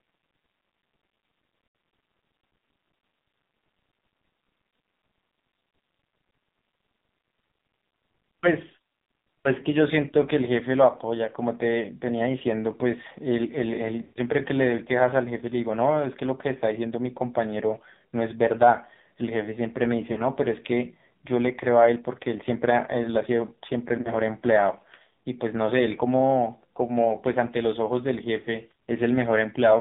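The speech passes throughout through the AMR narrowband mobile codec at a heavily compressed setting, which fits a low 5.9 kbps mode. Its vocal-tract model and sparse pulses leave a buzzy, synthetic voice confined to a 150 Hz to 3.7 kHz band.

Lost AMR speech frames occur at 1.66–1.74 s, 14.02–14.21 s, 20.12–20.21 s and 24.02–24.15 s. The decoder repeats the last good settings with falling gain, so each gap is a smeared dip. The longest, at 14.02 s, stretches and fades before the voice returns rough.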